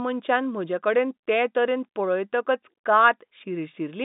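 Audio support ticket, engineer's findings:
Engineer's findings: no faults found in the speech.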